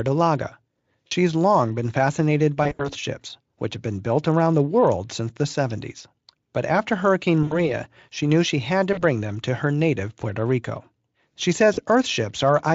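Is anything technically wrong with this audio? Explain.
Yes, there's VoIP packet loss concealed by the speech codec, at 1.07–1.12, 2.63–2.90, 7.43–7.69, 8.93–9.03 and 11.73–11.80 s. About 40–80 ms of audio goes missing each time, and the decoder extrapolates the last pitch and filter, giving a buzzy or noisy, fading smear with weak speech lingering just afterwards.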